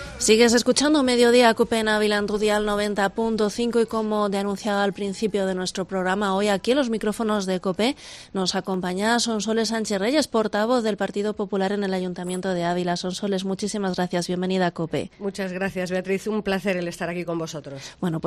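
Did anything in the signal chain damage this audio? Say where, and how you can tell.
Yes. Three single clicks at 8.74, 10.88 and 12.18 s point to dropped samples, likely at the driver or buffer stage. A fraction of a millisecond goes missing each time, so the waveform steps abruptly to a later value, drawing a thin vertical line on the spectrogram.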